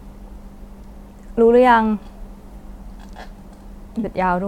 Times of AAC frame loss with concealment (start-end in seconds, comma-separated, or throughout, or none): 3.99-4.05